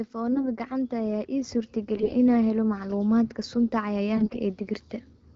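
A speech recording over an AMR wideband link with light codec damage. From 0.11 to 3.04 s, automatic gain rising lifts the level by about 8 dB, so voice and background swell together. AMR bit errors, corrupted bits in poorly protected parts of the frame, hit at 0.32–0.47 s (lighter), 1.96–2.13 s and 4.16–4.38 s (heavier). They make the voice hoarse, scratchy and gargly.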